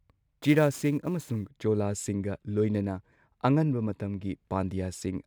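Speech, and for the first 1.5 s there's sample clock jitter: an unsteady converter clock, wobbling on the order of ten microseconds, makes a grainy hiss riding on the louder, brighter parts, sitting roughly 25 dB below the signal, before things clean up.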